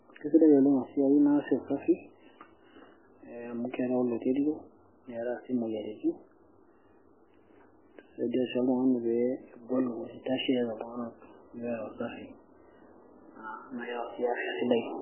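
Across the whole recording the speech sounds muffled and watery, with nothing above about 3.1 kHz, so the s and t sounds lose their edge, and a swirling texture hangs on the speech, with metallic chirps on the s sounds, as detail flickers in and out. The likely cause is heavy MP3 compression at a very low rate, which fits something around 8 kbps. Short of bits, the encoder chopped off the treble and kept zeroing weaker frequency components from frame to frame.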